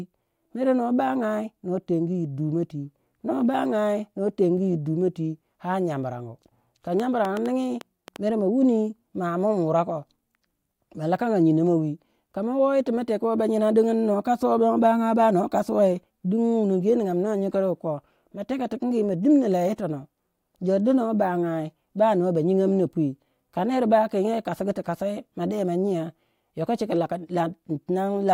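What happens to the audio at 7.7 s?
A burst of sharp, similar-sounding ticks sits on top of the speech from 7.00 to 8.17 s, ending just before "mere ma". About seven clicks arrive at an uneven pace, averaging roughly 5.2 per second, and they stand out at about 10 dB above the speech. This train of clicks is likely a repeating pulse from outside the recording, such as interference from nearby equipment or a faulty connection or power supply.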